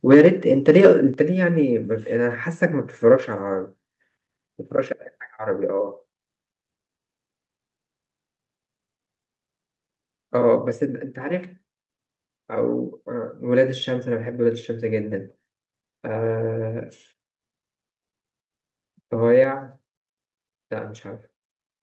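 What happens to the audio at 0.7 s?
From 0.68 to 0.91 s the speech clips: the loudest syllables take on a harsh, crackling edge, the sound of microphone overload. The likely cause is an input gain set too high, driving the peaks roughly 6 dB past the converter's ceiling so that their tops are sheared flat, with a few percent of samples in that stretch pinned at the converter's limit. The squared-off waveform adds dense upper harmonics, which is the distortion heard.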